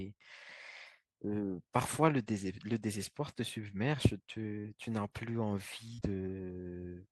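A speech recording with two instances of short concealed packet loss, at 4.60 to 4.65 s and again at 5.94 to 5.99 s. Each time, roughly 40 ms of audio failed to arrive in time, and the decoder bridged the gap by extending the preceding sound before blending back into the real signal. Each gap is heard as a brief smear or wobble in the speech.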